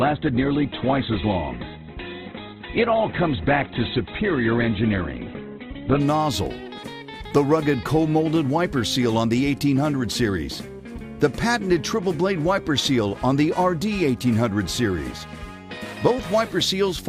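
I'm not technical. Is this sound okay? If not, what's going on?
No. For the first 6 seconds the sound is dull and muffled. Nothing above 4.2 kHz comes through, so the crisp, bright detail is missing. At 6.0 s it suddenly becomes clearer, with no break. This is an adaptive stream starting at a low bitrate. The player began with a cheap, low-quality version so playback could start fast. Once it had checked the connection, it switched to a much better version.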